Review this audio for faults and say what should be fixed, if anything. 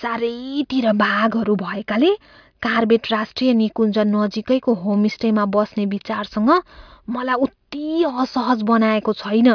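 Nothing to fix; no faults found in the speech anywhere in the clip.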